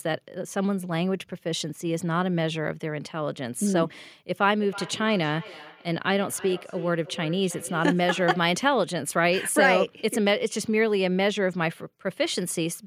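A speech clip with feedback echo between two devices from 4.58 to 8.58 s. The speech comes back at a fixed spacing of roughly 300 ms. The repeats peak at about 16 dB below the direct speech. Two devices in the same room seem to share one call. One plays out what the other's microphone sent, and that microphone hears it again. Each echo canceller only removes its own device's playback, so this loop goes unchecked.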